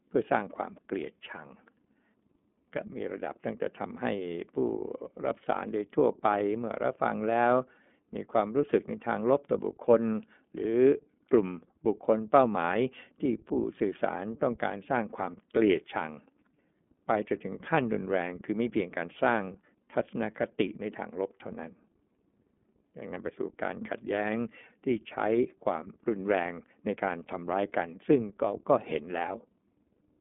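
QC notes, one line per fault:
Throughout: iLBC codec. The speech sits in a phone band of 200 Hz to 3.5 kHz, with nothing above 3.7 kHz. Each frame's excitation is coded alone, so the sound is plainly rough and synthetic. The roughness fits 30 ms frames at a low bitrate.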